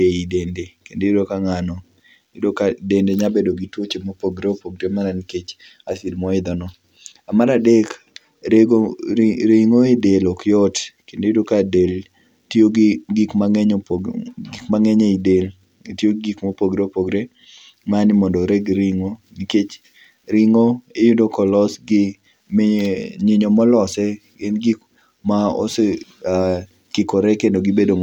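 No technical faults can be heard anywhere in this recording; the signal stays steady and intact throughout its whole duration.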